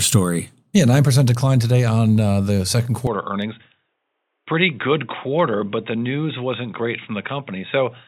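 From 3.07 s to the end, the speech turns dull and boxy with nothing above 3.8 kHz, drops roughly 5 dB and gains a faint new noise floor. This points to the input likely being switched to a poorer device. It differs from a plain filter because the level and background change abruptly too.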